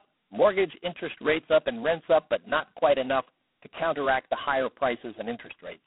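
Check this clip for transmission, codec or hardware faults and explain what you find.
One fault is present: G.726 ADPCM coding runs through the whole clip. The speech sits in a telephone band of roughly 200 Hz to 3.4 kHz, with nothing above 3.9 kHz. Each sample carries only a coarse difference from a predicted value, so heavy quantisation noise rides on the speech as a harsh, rasping hiss that rises and falls with its level, which fits the 16 kbit/s rate. Unlike steady background noise, it follows the speech, and there is no warbling or swirling.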